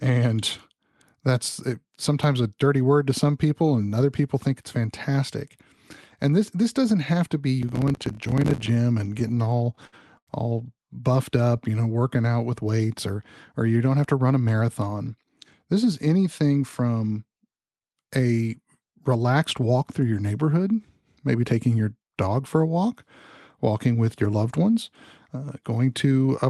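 From 7.62 to 8.68 s there is processor overload crackle. The processor repeatedly failed to deliver its audio buffers on time, and each miss was filled with silence. The gritty tearing suggests roughly fifty dropouts of about 5 ms each, which fits small buffers missing deadline after deadline.

Repeated stalls (stutter) follow from 9.19 to 10.29 s, just before "all buffed". Packets reached the receiver late and the jitter buffer emptied eleven times. Each gap was bridged by extending the last sound, adding 236 ms of filler with no audio lost. The longest hold is 85 ms, and concealment covers 22% of the span, so the speech halts and drags.

A jitter buffer slow-down runs from 11.37 to 12.23 s, between "all buffed" and "out with weights or". To rebuild its reserve, the receiver repeated short pitch-period segments, adding 113 ms. Playback drops to 88% speed at unchanged pitch, so syllables sound stretched and drawn out.

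From 14.18 to 15.12 s, right after "you don't have to", a jitter buffer speed-up trims the excess held in the buffer. Roughly 100 ms of short pitch-period pieces are removed, pushing playback to 109% speed at the same pitch. The phrase comes across as noticeably hurried. Underneath all four faults, the Opus call path at 32 kbps limits the audio to 12 kHz.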